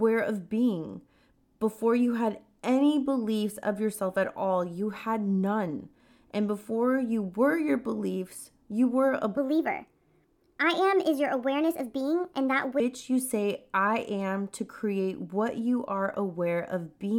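A section at the wrong speed runs from 9.37 to 12.80 s, after "beliefs you were a" and before "you say I am". The speech plays 1.32 times too fast, so pitch rises with tempo, about five semitones, sounding hurried and high, likely from playback fitted to the wrong clock.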